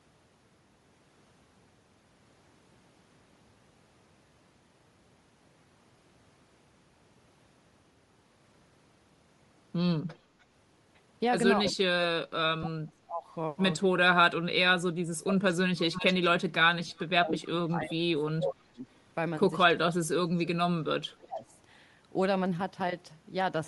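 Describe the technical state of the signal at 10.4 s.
An echo leak appears from 10.40 to 10.44 s: a very faint, brief copy of the speech trailing the original by about 0.3 s. The likely cause is a loudspeaker on the far end whose echo canceller let a scrap of its own microphone pickup return down the line.

Bluetooth LC3 compression also runs through this moment and the whole clip. The upper spectrum sounds thinned and refilled with noise, giving the speech a plainly audible grainy, breathy edge, which fits a low-bitrate LE Audio link, likely using 7.5 ms frames at around 48 kbps.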